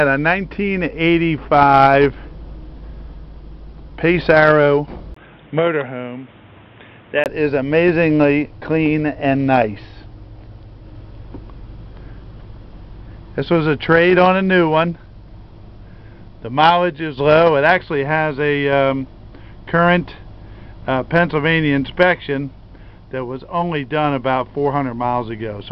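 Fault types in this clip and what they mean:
Input switched to a poorer device: from 5.14 to 7.26 s the sound turns dull and boxy, with nothing above 3.8 kHz, a brief 20 ms gap at the switch, faint new background noise and an unchanged level, likely because recording briefly moved to a lower-grade microphone.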